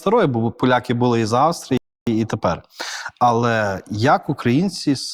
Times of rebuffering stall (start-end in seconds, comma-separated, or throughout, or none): 1.77-2.07